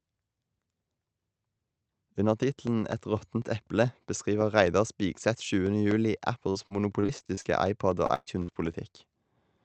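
From 6.50 to 7.46 s and again from 8.06 to 8.95 s, repeated packet loss (robotic sound) leaves the speech choppy with pieces missing. Each hole, up to 121 ms long, is patched by stretching the last sound, showing on a spectrogram as smeared, repeated bands and on the waveform as flattened, periodic stretches.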